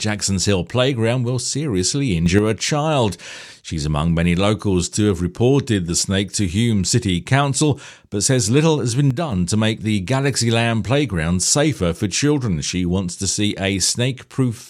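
Sudden gain jumps occur from 2.26 to 2.39 s, after "playground will seriously", rising about 6 dB, and from 9.11 to 9.32 s, after "but says little has", falling about 6 dB. Both likely come from a gain change applied without a ramp, so the speech and background noise step in level together.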